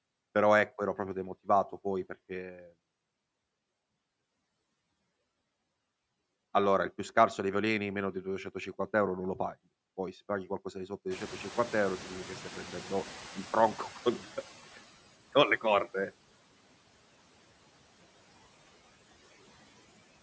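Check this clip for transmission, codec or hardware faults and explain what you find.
Two processing faults stand out, both from noise suppression in the call chain.

Noise suppressor artifacts run through the whole clip: the suppressor pulls steady background noise down by about 16 dB frame by frame, so the residue swells under speech and sinks in gaps.

Noise suppressor catching up occurs from 11.1 to 14.88 s, after "qualcosa di sotto di" and before "con le corde". The room noise jumps sharply, by roughly 22 dB, near 11 s. The suppressor's noise estimate takes 3.78 s to follow, so the louder noise passes through with less reduction at first before settling to about 14 dB of reduction.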